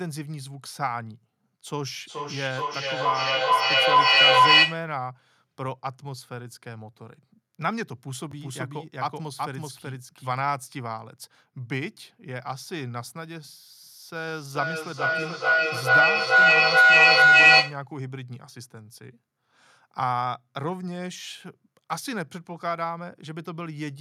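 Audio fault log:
1.9–4.91 s, feedback echo between two devices: each phrase comes back roughly every 0.4 s, thinner and more ringing, and the repeats pile up to about 14 dB above the speech. A second device in the room replays this microphone's signal, and the echo canceller here cannot remove it.
8.32–10.32 s, doubled audio track: a full-band copy of the speech trails about 0.4 s behind at roughly the same level, with no decay or room colour, and starts and stops abruptly. The likely cause is a second, slower capture path mixed in with the first.
14.15–17.88 s, feedback howl: the microphone-to-loudspeaker loop between two devices gains level on every trip, so the repeats narrow into a tone around 1.5 kHz. It pulses about every 0.4 s and peaks about 14 dB above the speech until it stops at 17.88 s.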